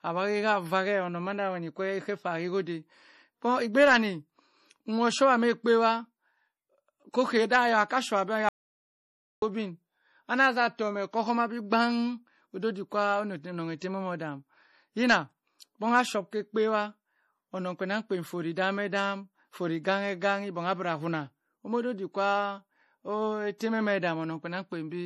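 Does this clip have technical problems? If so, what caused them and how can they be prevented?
Yes. The speech sounds watery and swirly throughout, with nothing above 14.7 kHz; this is likely MP3 compression at a bitrate around 40 kbps. Encode at a higher bitrate to prevent it.

After "showah bi", an audio dropout to silence runs from 8.49 to 9.42 s: silence with no room tone, unlike a fade or a quiet pause. A lost input link is the likely cause. Secure cables and monitor inputs while recording.

Pre-echo adds a 25 ms hiss from 23.58 to 23.60 s, just before a sharp attack, as codec noise fills the quiet part of the block. Unlike a click, it smears forward into the attack. Use an encoder with block switching or a higher bitrate.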